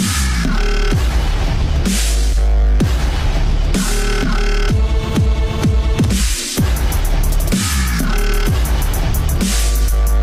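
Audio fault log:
9.14 s corrupt frame decoded: a single compressed frame arrives with damaged bits and the decoder plays it anyway, so misread gains and codes throw energy into the wrong frequencies for that frame's length, producing a brief glitch peaking around -15 dBFS.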